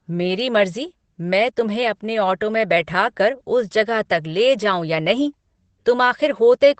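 From start to finish, the speech has passed through Opus voice compression at a low rate. The encoder used its SILK linear-prediction mode with a band limited to wideband, so nothing survives above about 8.7 kHz, and the excitation is coded coarsely. The damage is plainly audible: the speech sounds muffled and dull, with a hoarse, faintly robotic texture. That fits a bitrate of around 12 kbps and 20 ms frames.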